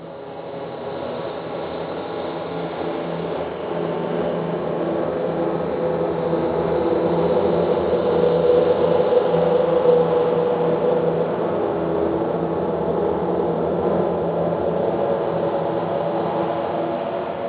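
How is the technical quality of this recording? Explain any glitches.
The recording has one fault, present for its whole length.

Aliasing, throughout: the audio was downsampled without filtering, consistent with an 8 kHz rate. Content above 4 kHz folds back as unrelated tones roughly 30 dB down. A spectrogram shows energy running hard up to a 4 kHz edge.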